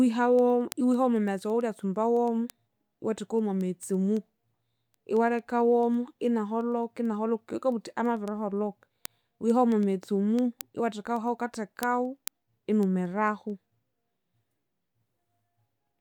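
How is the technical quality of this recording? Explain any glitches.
The recording is marred by a steady train of ticks running through the speech from 0.17 s to 15.94 s. These are word clock ticks: sharp clicks of uneven strength, about ten per second, some 150 in all. The receiving device's clock drifts against the sender's by around 200 parts per million, so every tenth of a second or so a single sample is dropped or repeated.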